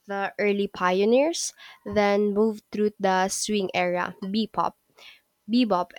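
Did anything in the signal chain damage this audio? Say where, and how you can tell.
No, nothing in this speech stood out on listening as damage from any stage of the signal chain.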